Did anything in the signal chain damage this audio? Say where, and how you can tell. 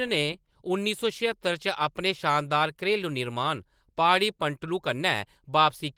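No, the speech has passed through Opus voice compression running in its hybrid fullband mode at 20 kb/s, and its content still reaches up to about 20.2 kHz.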